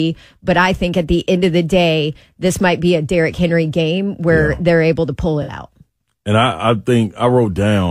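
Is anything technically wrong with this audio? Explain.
Yes. AAC frame loss with concealment occurs at 5.42 to 5.53 s, after "they're able to pull". The decoder rebuilt 64 ms of missing audio from the last good spectrum, leaving a smeared, phasey blur.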